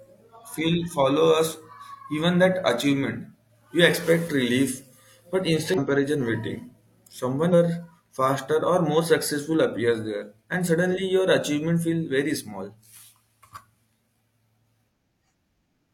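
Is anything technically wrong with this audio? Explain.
Yes, there is damaged data in the compressed stream, at 5.74 to 5.79 s and 7.49 to 7.54 s. Corrupted bytes make the decoder misread frames and resynchronise, producing brief glitches. On a spectrogram each appears as a short broadband smear; the waveform shows an abrupt discontinuity.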